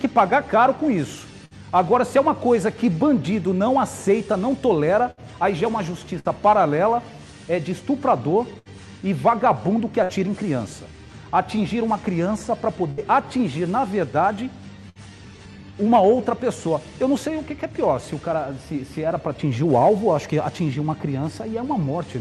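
Bursts of packet loss at 1.45, 5.11, 6.19, 8.59, 10.03, 12.91 and 14.89 s: each time, about 60 ms of audio vanishes. The receiver stretches the preceding sound for 50 to 70 ms, fading it into a brief buzz or hiss before playback resumes. Beneath this, the call codec's band limit near 12 kHz, consistent with Opus at around 64 kbps, dulls the top end.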